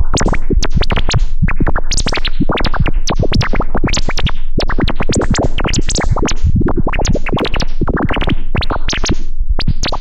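Dropped samples at 7.40 and 8.67 s in this recording of sounds: each is a single sharp click, likely where under half a millisecond of samples went missing and the waveform jumped.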